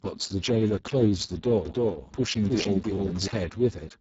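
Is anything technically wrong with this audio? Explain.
Yes, two faults. Throughout, the speech carries Speex codec damage: hoarse, noisy and partly robotic, with nothing above 7.7 kHz. Too few bits reach the CELP excitation, which fits a very low setting of around 6 kbps, and the upper band is only a thin noise fill.

From 1.66 to 3.28 s there is a doubled audio track. A second full-band copy of the speech, about as loud as the original, follows roughly a third of a second behind. It has no room decay and starts and stops abruptly, likely from a duplicated capture path.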